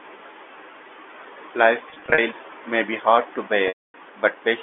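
Brief buzzy stutters at 1.9 to 2.18 s, then a 260 ms loss that fades to silence at 3.68 s: packet loss with pitch repetition, repeating the last pitch period over the lost packets.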